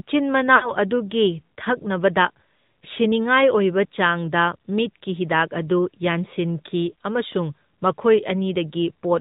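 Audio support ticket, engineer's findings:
AMR narrowband mobile codec, whole clip: hard band limit at 4 kHz, buzzy, synthetic speech with plainly audible codec damage, consistent with AMR-NB at a mid rate such as 10.2 kbps. On the spectrogram, nothing above 4 kHz and smeared, pulse-like harmonics.

Lost AMR speech frames, 0.56 to 0.73 s: brief drawn-out warble fading toward silence, then a weak, rough restart. The decoder repeats its last pitch and vocal tract settings with decaying gain. About 60 ms of loss fits three 20 ms frames. On the waveform, a shrinking envelope; on the spectrogram, frozen, fading harmonics.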